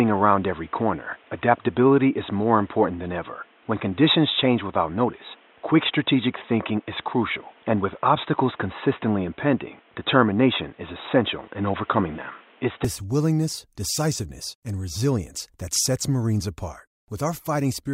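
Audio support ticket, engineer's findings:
Speech band-limited and boxy from 0 to 12.85 s, clearing abruptly right before "willingness decisiveness and resilience". Likely cause: input switched to a poorer device, headset call profile or secondary mic. Spectrogram: hard ceiling near 3.8 kHz, then full band returning, no gap at the switch. Added noise floor about 35 dB under the speech, ending with the switch. Waveform: a level step of about 5 dB at 12.85 s.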